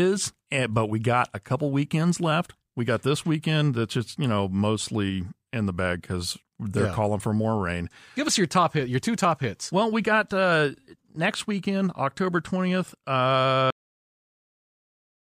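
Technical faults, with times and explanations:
13.70 s to 15.29 s, cut-off end: the last stretch of audio buffers was never written or played out, so the speech stops mid-sound at 13.70 s and drops straight to digital silence for the final 1.6 s, with no natural decay.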